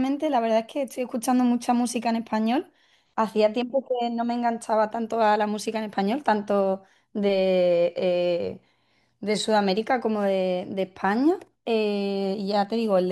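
No technical faults are audible anywhere in the speech recording.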